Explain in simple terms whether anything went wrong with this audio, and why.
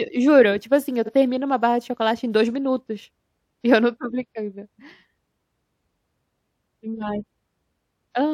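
At about 1.05 s the speech stutters: a tiny slice of sound, about 46 ms long, plays and then instantly plays again before the audio moves on. This fault is called repeated frames. The compressed audio is stored in small blocks, and here one block's worth, which fits a single frame, was written or sent twice, so the player simply played it twice. The clip ends up longer by that same 46 ms.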